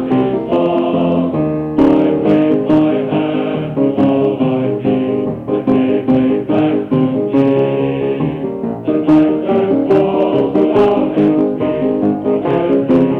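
Hard clipping runs throughout: about 7 dB of overdrive flattens a small fraction of peaks, giving abrupt crackle on loud moments rather than the rounded warmth of soft saturation.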